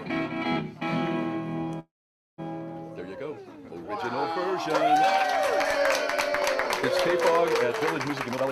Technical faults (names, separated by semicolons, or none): call audio freeze; jitter buffer speed-up